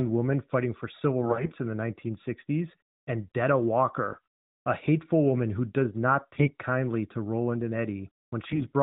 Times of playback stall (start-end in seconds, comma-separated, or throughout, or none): none